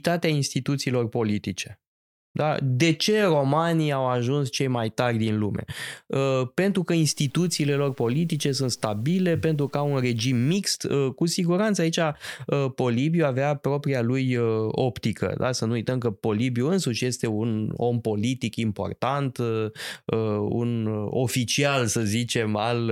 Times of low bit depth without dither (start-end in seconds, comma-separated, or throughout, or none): 7.04-10.57